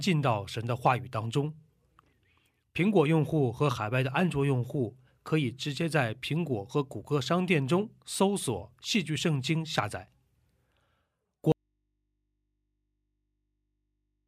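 At 11.52 s the speech drops out abruptly to a faint residue, just low mains hum, way down, through to the end; most likely the signal feed broke while the input stayed live.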